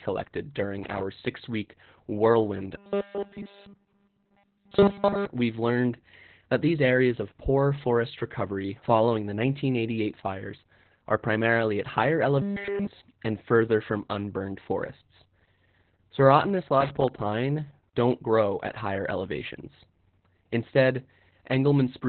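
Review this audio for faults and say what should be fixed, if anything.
Opus voice compression throughout: the speech is muffled and slightly robotic, with nothing above 4.3 kHz, pointing to SILK narrowband coding at roughly 8 kbps.

Loose connector crackle from 0.84 to 1.03 s: an irregular scratchy burst where a worn or dirty contact briefly broke and remade the signal path.

Prevention: encode at a higher Opus bitrate to keep wideband speech, and clean or replace the suspect cable and connector before recording.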